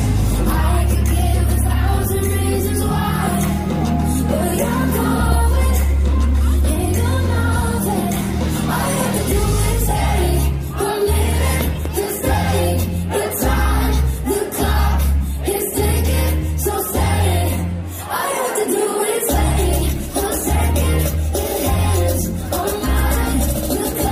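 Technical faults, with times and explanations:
5.32–5.34 s and 11.61–11.88 s, loud pop: a single sharp pop, then a double pop, each peaking about 10 dB above the sound, which continues underneath. A sudden voltage step or pulse, likely from a plug, switch, static discharge or driver glitch, was added to the signal.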